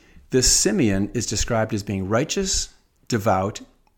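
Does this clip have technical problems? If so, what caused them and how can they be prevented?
No, there are no technical problems in this recording.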